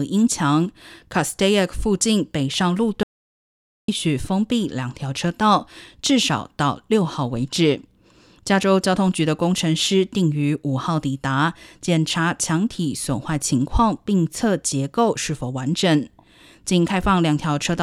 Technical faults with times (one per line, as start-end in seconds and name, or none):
3.03-3.88 audio dropout to silence